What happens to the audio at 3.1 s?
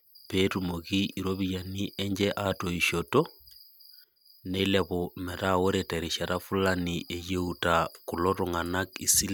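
At 3.1 s the audio is intact, with no dropout, click, distortion or other fault at that point.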